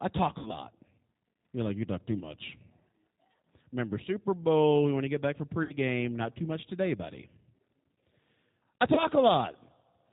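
Speech heard through the G.729 codec at 8 kbit/s, with plainly audible damage: nothing above 4 kHz survives, and the voice has a rough, slightly synthetic buzz from being rebuilt from a filter and a few pulses, which sets it apart from ordinary narrowband telephone filtering. VoIP packet loss concealed by the speech codec occurs at 0.39–0.53 s, at 5.63–5.73 s just after "to get back for", and at 8.94–9.04 s. Each gap is filled with a stretched, fading buzzy tone or coloured noise rather than silence or a click, and the voice stays weak or distorted after each gap. The first two gaps suggest about 60 ms lost, which fits two packets, and the last suggests about 30 ms, which fits one.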